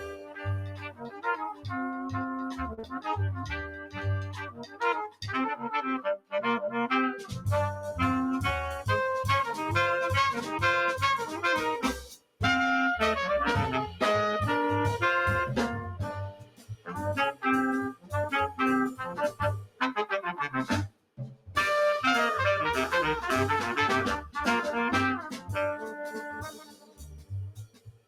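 A noise suppressor applied to music or sounds runs through the whole clip, tuned for speech and left active on material it misreads as noise. It treats sustained tones, ambience and decay tails as something to remove, so gain swings by around 15 dB as onsets pass through and held portions are pulled down. The result is audible pumping and a thinned, fluttering texture across all 28 seconds.

The first sound cut by the noise suppressor spans 0.0 to 5.23 s, with the deepest drop about 17 dB and roughly three seconds affected in total. Held and fading parts sag while attacks stay intact.

Inside that stretch, at 2.73 to 2.79 s, a short stall from a late packet occurs. The jitter buffer ran dry, and the receiver stretched the last sound for 40 ms until the packet arrived, then resumed where it left off. Nothing is lost, but the sound hangs briefly with a faint buzz, and playback delay grows by 40 ms.

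Immediately after, from 2.79 to 2.85 s, comes a short concealed packet loss. 40 ms of audio never arrived, and the receiver synthesised 35 ms by extrapolating the preceding signal before crossfading back. It is heard as a quick smear or wobble.

Further cuts by the noise suppressor follow at 6.17 to 7.32 s, 10.39 to 12.40 s, 16.28 to 18.13 s, 19.30 to 19.81 s, 20.88 to 21.56 s, and 25.33 s to the end. Each reaches about 18 dB of attenuation, shaving sustains and truncating decays.

Between those, from 8.77 to 9.08 s, a jitter buffer speed-up plays the sound at 114% while the pitch is held. The buffer was over target, so the receiver repeatedly excised pitch-period-sized slices, around a twentieth of a second in all, to reduce latency. That passage sounds hurried, and its timing lurches forward.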